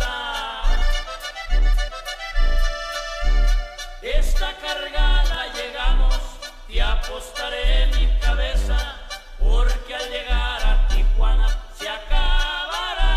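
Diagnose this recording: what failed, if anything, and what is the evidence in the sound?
Overlap between stream segments, at the playback stage. A tiny skip at 5.34 s: about 40 ms vanishes where overlapping segment timestamps were trimmed, and the waveform jumps.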